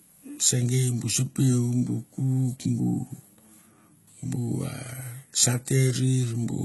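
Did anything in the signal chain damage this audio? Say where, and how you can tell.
Yes, at the codec stage, and it runs the whole way through. The treble sounds synthetic, with s sounds going gritty and lispy and nothing above 11.8 kHz. That's likely HE-AAC compression at something like 16 kbps, rebuilding the top end by copying lower bands upward.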